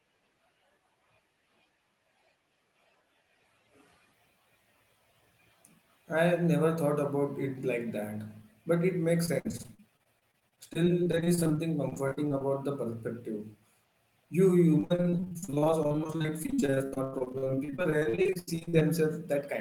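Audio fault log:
9.25–12.42 s, repeated packet loss (robotic sound): Dozens of short dropouts, none longer than 54 ms. Each hole is filled by stretching the sound just before it, so about a quarter of this stretch is patched. The speech turns choppy and machine-like.
14.80–18.83 s, repeated packet loss (robotic sound): The same fault, denser. Gaps reach 82 ms, and around two-fifths of the span is concealed by repeated sound. The speech sounds more broken and robotic here.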